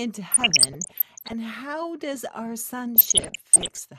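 Right from the start the speech sounds dull and a bit gurgly, with a granular grit to it. That points to MP2 compression at a fairly low rate, something around 80 kbps. The likely cause is the Layer II encoder running short of bits, so it switches off upper sub-bands and quantises the remaining ones coarsely. The top end keeps flickering in and out, which is where that dull, gurgling character comes from, and the damage is plainly audible the whole way through.

From 0.32 to 1.33 s, and again from 2.96 to 3.80 s, you get DAB burbling on top of that, riding over the speech. It sounds like weak reception, with bit errors slipping past error correction into the MP2 data at roughly 1.5%. Corrupted samples put short blips of noise into single sub-bands, and corrupted scale factors make sub-bands jump in level for up to a frame.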